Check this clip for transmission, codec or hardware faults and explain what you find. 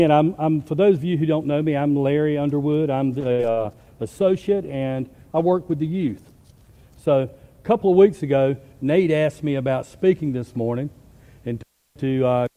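Three transmission faults appear, all near the start of the clip's middle section.

From 3.22 to 9.01 s there is a call bitrate drop, from 128 to 20 kbps. The encoder codes coarsely and trims the highs, so the sound turns rough and muffled.

Two bursts of packet loss land at 3.32 to 3.42 s and 3.51 to 3.60 s. Each time the receiver stretches the last sound, fading it, then skips about 60 ms.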